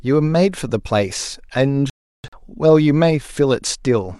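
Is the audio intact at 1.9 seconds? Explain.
No. At 1.90 s the speech falls into a digital broadcast dropout lasting until 2.38 s. The receiver stopped getting decodable frames, either through signal loss or failed checksums, and muted its output until valid data resumed. About 384 ms of audio is missing, spread over roughly 430 ms as a cluster of gaps. The longest silent stretch is about 340 ms, and the one short hole beside it fits a single discarded frame. Whatever was transmitted during those gaps is gone.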